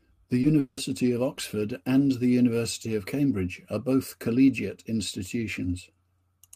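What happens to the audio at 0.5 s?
Just before 0.5 s, a short concealed packet loss at 0.41 to 0.45 s removes about 20 ms of audio. The receiver bridges the gap by extending the preceding sound and blending back in, leaving a brief smear or wobble rather than a clean break.

Just after it, from 0.59 to 0.79 s, the audio is replaced for about 180 ms by a synthetic continuation of the last sound that does not drop to silence. This is likely a long network dropout whose missing stretch was concealed and never recovered.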